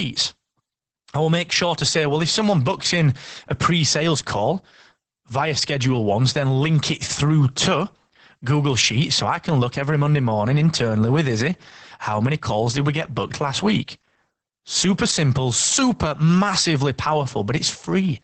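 Muffled, hoarse and faintly robotic throughout, the speech has a coarse, buzzy texture and nothing above about 8.6 kHz. That is heavy Opus voice compression. The sound points to the SILK linear-prediction coder in wideband mode at a bitrate around 10 kbps. At that rate the encoder cuts the band at 8 kHz and codes the excitation so crudely that the natural breathiness turns rough and synthetic.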